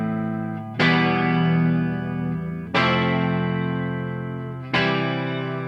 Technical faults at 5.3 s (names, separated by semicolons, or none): channel delay (comb filtering)